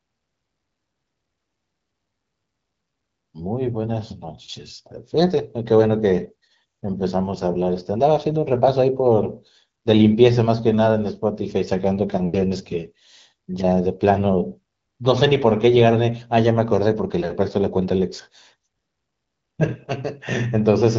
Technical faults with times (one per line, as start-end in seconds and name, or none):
none